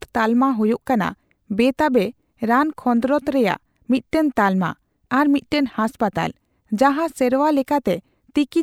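No faults detected in this speech recording; nothing to flag.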